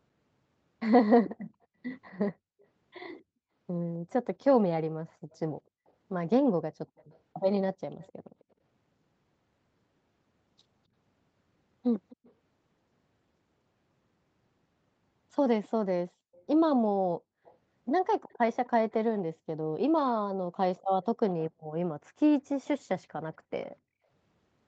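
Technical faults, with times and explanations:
1.63–2.65 s, 4.39–8.44 s, 12.09–12.32 s, 15.65–19.2 s, 20.78–22.68 s, echo leak: a faint copy of the speech trails about 257 ms behind, barely there early on and much clearer around 21 s. That's likely a far-end loudspeaker feeding back past an echo canceller that didn't fully clean it up.
1.66–1.77 s and 21.54–24.08 s, background gated by the echo canceller: the room tone ducks hard, by about 37 dB in the brief first dip and about 40 dB in the later one, which adds up to roughly a second of gaps. The canceller clamped the mic while the loudspeaker played.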